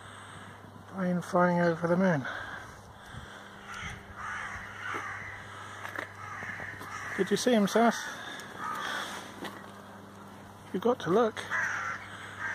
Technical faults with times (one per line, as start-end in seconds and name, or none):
0.00-12.54 computer activity noise